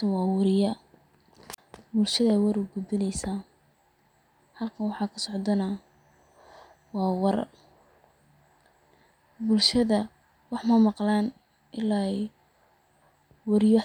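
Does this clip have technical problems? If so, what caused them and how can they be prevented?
Yes, there's a wireless microphone squelch dropout at 1.52–1.58 s, just before "bulshada war ugudbineysaa": the radio signal faded, so the receiver's squelch muted the speech for about 37 ms. Keep the transmitter in clear line of sight to the receiver, with fresh batteries and a clean frequency.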